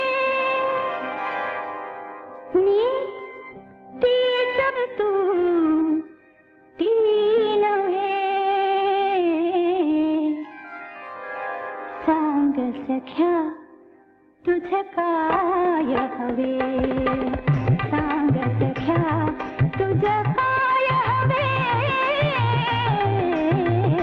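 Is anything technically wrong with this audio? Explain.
Yes, there are two faults. At 4.75 to 4.77 s a skip ahead drops about a second of audio. Playback jumps straight forward with no gap filled in. From 4.84 to 8.44 s a jitter buffer speed-up trims tiny pitch-period pieces, removing about half a second. The sound runs 114% fast at unchanged pitch and feels hurried.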